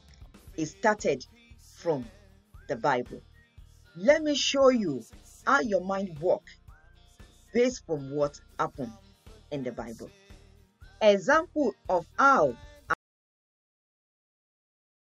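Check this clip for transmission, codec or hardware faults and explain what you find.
There is one fault: an audio dropout to silence from 12.94 s to the end. The sound cuts off abruptly and the last 2.2 s are silent, likely from a lost input or mute while recording continued. Unlike a fade or noise gate, it drops instantly and leaves no room tone.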